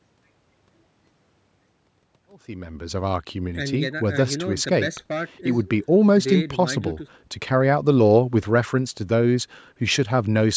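No technical faults are audible.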